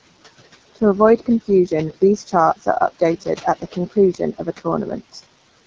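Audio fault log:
Throughout: channel delay (comb filtering). One channel arrives a tiny fraction of a millisecond late, a few samples at most. When the two are summed to mono, the shared content cancels at evenly spaced frequencies, with the first notch near 3 kHz. Within this band-limited clip, that notch is the one that matters. It carves a fixed hole through the upper midrange, so the sound comes across hollow and slightly phasey, with presence missing in a way that never shifts.
Throughout: noise suppressor artifacts. A frame-by-frame suppressor pulls down the bands it judges to be steady noise, by about 18 dB between phrases. The room noise sits roughly 19 dB below the speech. So the background drops away in pauses and swells back under each phrase, giving a pumping floor.
Throughout: AMR wideband (HD Voice) codec. Nothing reaches above about 7.1 kHz, which is consistent with the AMR-WB frame, where the top slice is filled with shaped noise rather than coded detail. 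The damage is plainly audible: the speech is rough and raspy. That points to one of the lower AMR-WB rates, around 8.85 kbit/s, where the vocal tract model has too few bits to reproduce the pulse structure cleanly.
3.21–3.74 s and 4.13–4.66 s: speech cut by the noise suppressor. In both spans the suppressor mistook parts of the speech for background and turned them down along with it. The first span drops by up to about 17 dB over roughly a tenth of a second in total. The second drops by up to about 14 dB over roughly 150 ms. The affected speech sounds swallowed and faint, as if briefly pulled away from the microphone.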